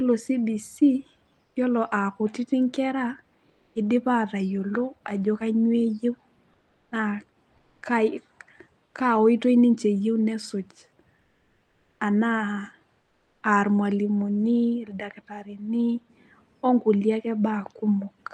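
This is a speech recording carried over an Opus call path, with content above about 12 kHz cut off. In five pauses the faint background, roughly 45 dB below the loudest speech, gives way to comfort noise: at 1.45–1.55 s, 3.49–3.75 s, 6.53–6.91 s, 8.85–8.93 s and 13.01–13.41 s. The likely cause is discontinuous transmission, in which the receiver synthesises filler noise while the sender is silent. On a spectrogram these gaps show a smooth, textureless noise floor, up to about 4 dB lower. The waveform flattens into an even band of noise.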